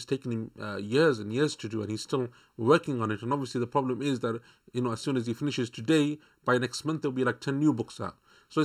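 One channel of this speech recording arrives slightly behind the other, by somewhere under a millisecond, and when the two are folded to mono the shared signal partly cancels itself, a channel delay (comb filtering) fault present from start to finish. The cancellations fall at regular intervals, the lowest near 700 Hz and the rest stacked above it at roughly 1.4 kHz spacing. The result is a hollow, phasey tone with fixed notches that never move.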